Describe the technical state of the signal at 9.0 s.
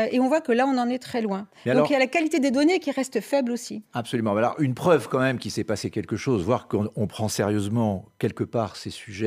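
At 9.0 s the speech signal is intact, with no audible technical fault at that moment.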